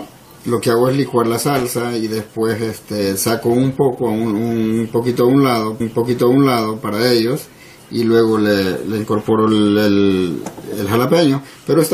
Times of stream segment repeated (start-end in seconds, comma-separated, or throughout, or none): 5.79-6.82